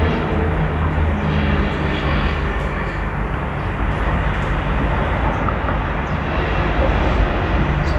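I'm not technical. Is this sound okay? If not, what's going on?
No. From 5.28 s to the end there is imaging from linear upsampling. The sound was converted to a higher rate by joining old samples with straight lines, a crude method that fits audio raised from 24 kHz to 44.1 kHz. That dulls the top of the sound and leaves very faint mirror copies of it between 12 and 24 kHz, heard as a slight metallic shimmer on the brightest, highest parts.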